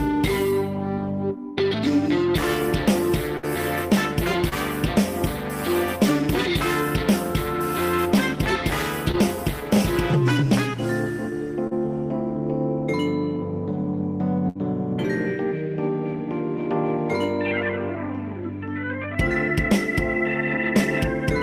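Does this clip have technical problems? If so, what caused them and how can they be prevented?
Yes. There are two bursts of packet loss, at 3.37 to 3.45 s and 14.49 to 14.57 s. In each, about 60 ms of audio never arrived in time to play. The receiver covered the hole by stretching the last sound it had for roughly 54 ms and 61 ms, fading it as it went, so the sound turns briefly into a held buzz or dying hiss before jumping ahead past the lost stretch. A larger jitter buffer and redundancy or forward error correction on the link would prevent these.

Short concealed packet losses occur at 4.49 to 4.53 s, 9.11 to 9.15 s and 11.67 to 11.73 s, where 20 ms, 20 ms and 40 ms of audio went missing. Each time the decoder extrapolated from what came just before, for about 26 ms, 20 ms and 34 ms, then blended back into the real signal. The result is a quick smear or wobble. Reducing network congestion and packet jitter, for example with prioritised traffic for the call, would prevent these.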